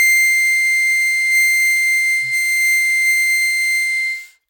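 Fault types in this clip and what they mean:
No faults can be heard in this music.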